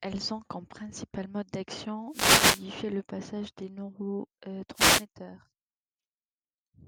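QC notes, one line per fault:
2.08–2.65 s and 4.73–5.05 s, wireless microphone noise hit. Two short bursts of static swish over the speech, about 0.57 s and 0.32 s long. The FM radio signal fades as reflections cancel, so receiver noise rises.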